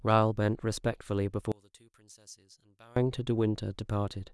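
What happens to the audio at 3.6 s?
Nothing goes wrong at 3.6 s: the speech carries on intact through that moment, with no dropout, click, distortion or other audible fault.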